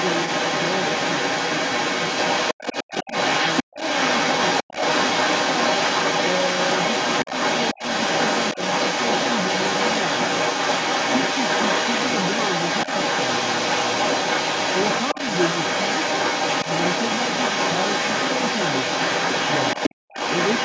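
Throughout the clip, from 0.0 s to the end, a second voice runs underneath the talker, at times somewhat louder than the speech itself. This is the other side's voice leaking through, likely because the far end played from a loudspeaker and the echo canceller left part of it in the microphone signal.

At 2.83 to 3.11 s, 3.63 to 3.80 s and 4.64 to 4.77 s, the talker's speech drops out almost completely for short bursts. Shallower dips follow at 7.25 to 7.32 s and 8.54 to 8.59 s. This is speech suppressed in double talk, likely the canceller turning everything down while both sides spoke at once.

From 19.95 to 20.08 s, the room sound drops by about 40 dB for a brief moment, then comes back. This is background gated by the echo canceller, which clamped the microphone hard while the loudspeaker was active. The call microphone processing leaves nothing above 8 kHz.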